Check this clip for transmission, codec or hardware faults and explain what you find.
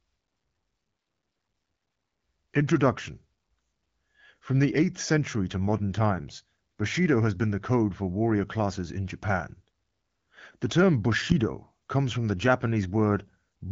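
No faults found.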